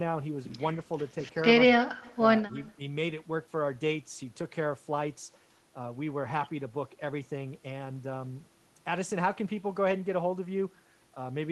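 A loudspeaker on the far end of the call was likely feeding back into its microphone, with the echo canceller letting some of it through. The result is an echo leak at 2.03 to 2.17 s and again at 2.50 to 2.74 s: a delayed copy of the speech trailing it by 197 ms, very faint and far below the direct speech, heard as brief scraps rather than a clear repeat.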